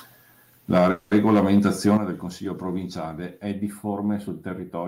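From 0.72 to 1.97 s the loudest speech peaks sound harsh and crackly. This is microphone overload. The input level is likely set too high, pushing peaks about 6 dB past the converter's limit. Their tops are flattened, and a few percent of the samples are clipped.

At 0.78 s the microphone volume is stepped down. Speech and background both drop by about 4 dB at once. The call software likely lowered the input gain after hearing the distorted peaks. The same thing happens again at 1.97 s, where the drop is about 8 dB.

From 0.91 to 1.13 s there is a call audio freeze. The sound stalls, and for 200 ms a fading continuation of the last sound is heard. Packets were likely delayed, so the jitter buffer ran dry. Speech then resumes where it stopped, with nothing lost and 200 ms of added delay.

From 3.51 s to the end, the speech turns hollow and phasey. This is channel delay causing comb filtering. 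One channel lags the other by a few samples, about 0.07 ms. Summed to mono, the two cancel at evenly spaced frequencies, with the first notch near 7 kHz.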